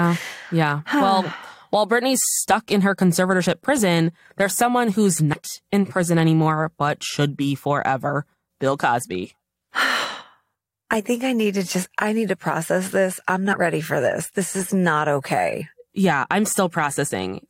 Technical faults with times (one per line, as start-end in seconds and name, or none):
5.32 compressed frames skipped
13.52 compressed frames skipped
15.61 compressed frames skipped